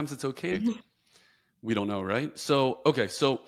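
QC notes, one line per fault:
0.51–0.53 s, skip ahead: the speech lurches forward with no gap, losing around 0.4 s, because queued-up later audio was joined directly onto earlier audio.
0.61–1.94 s, jitter buffer speed-up: the speech sounds hurried at unchanged pitch, running about 109% speed as a swollen buffer trimmed roughly 150 ms in small pitch-period cuts.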